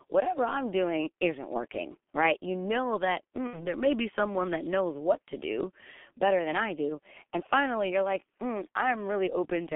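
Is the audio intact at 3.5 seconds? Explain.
No. From 3.47 to 3.70 s there is VoIP packet loss concealed by the speech codec. About 60 ms of audio never arrived, which fits two missing 30 ms frames. The decoder filled the hole by repeating its last pitch and spectral shape at falling gain, so the speech turns into a fading buzzy, smeared tone. Because each decoded frame builds on the one before, the speech stays weak and distorted until about 3.70 s, well after the gap itself.

The moment also carries the clip's constant G.723.1 codec damage. Nothing is heard above about 3.4 kHz or below about 200 Hz, and the very low bitrate, which fits roughly 6.3 kbit/s, together with the codec's slow 30 ms model updates leaves the speech heavily muffled and hoarse, with blurred consonants.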